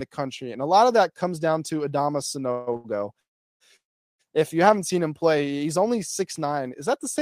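A run of delivery hiccups hits the speech between 2.51 and 4.21 s. The first is a call audio freeze from 2.51 to 2.69 s. Packets were likely held up in transit, the jitter buffer emptied, and the receiver spun the last sound on for about 155 ms as a buzzy or hissy sustain rather than silence. When the flow resumed, the speech carried on from the same point. Nothing was lost, but the sentence is pushed back by that extra time.

Right after, two short stalls from a late packet follow back to back, from 2.73 to 2.77 s and from 2.77 to 2.86 s. In each, one packet missed its playout moment and the buffer ran dry, so the receiver stretched the current sound for about 17 ms and then 76 ms until the data came in. The result is a syllable held unnaturally long with a faint buzz or dip, adding a little more delay and cutting nothing.

Two longer call audio freezes come next, at 3.20 to 3.62 s and 3.76 to 4.21 s, filling about 401 ms and 430 ms. 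In each, the held sound fades within a few tens of milliseconds and leaves dead air of about 370 ms and 390 ms. The speech then picks up exactly where it stopped, so these read as abrupt pauses dropped into the flow rather than missing sound.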